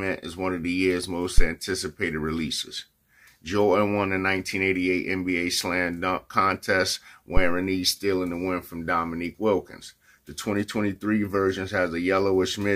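A deep low thump hits at 1.38 s, peaking near about -4 dBFS and dying away within 18 ms, then a longer one at 7.37 to 7.66 s at about -7 dBFS, decaying over 66 ms. These are phantom power thumps: a supply switched on a live input pushes a DC step through the coupling capacitors.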